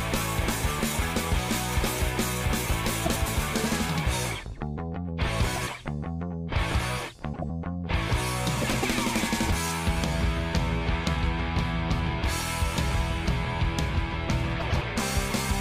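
Frames out of order occur five times: 3.05–3.28 s, 5.56–5.69 s, 7.34–7.50 s, 8.62–8.85 s and 14.60–14.83 s. In each, two adjacent blocks of the stream were decoded in swapped order, so the second block plays before the first. The blocks run 104.5 ms, 52.2 ms, 78.4 ms, 104.5 ms and 104.5 ms. That fits runs of four, two, three, four and four frames. Each sounds like a brief garbled flutter, and no time is lost.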